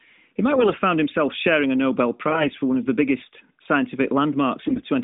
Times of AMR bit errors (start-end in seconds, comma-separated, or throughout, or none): 0.52-0.77, 4.62-4.84